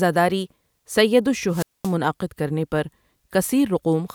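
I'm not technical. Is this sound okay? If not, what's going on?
No. From 1.48 to 1.95 s there's a wireless microphone squelch dropout: a burst of hiss, then about 0.22 s of near silence before "کرنے پر". Unlike a plain digital gap, the hiss beforehand shows a fading radio signal.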